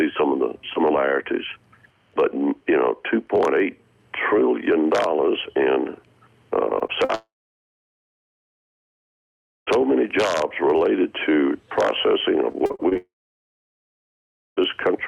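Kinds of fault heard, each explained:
Short concealed packet loss: at 6.79, 6.87 and 7.05 s, 20 to 40 ms of audio went missing and was patched by extending the preceding sound, leaving brief smears or wobbles.
Long network dropout: from 7.15 to 9.69 s and 12.97 to 14.59 s, the sound fades quickly to near silence for about 2.4 s and 1.5 s. This is likely a dropout, and that audio never returns.
Repeated packet loss (robotic sound): from 12.53 to 12.97 s, seven gaps of up to 40 ms are patched in quick succession, covering about a third of the stretch and giving choppy sound with pieces missing.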